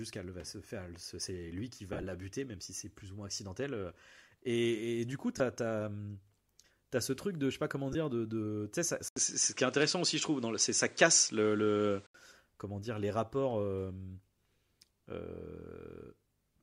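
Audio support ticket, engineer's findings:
Lost LE Audio frames, 1.93–2.03 s, 5.38–5.40 s, 7.93–7.95 s: short noisy smears where LC3 concealment replays the last spectrum with random signs. Spectrogram shows blurred vertical patches with harmonics lost.

Input switched to a poorer device, 9.08–12.14 s: 80 ms waveform gap, then duller sound. Spectrogram shows a hard ceiling at 9.7 kHz, a raised noise floor and a level step of around 5 dB. Likely a microphone or headset swap.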